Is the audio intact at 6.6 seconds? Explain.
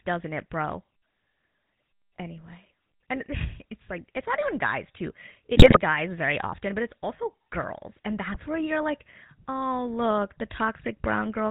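No. At 6.6 seconds the speech carries GSM full-rate codec damage, as it does from start to end. This old mobile codec rebuilds the sound from a model of the vocal tract. That model is fed by evenly spaced pulses, and only one excitation sample in three survives. Nothing above 4 kHz gets through. The result is a plainly audible buzzy, gravelly roughness with a dull top end. That fits a 13 kbps full-rate stream.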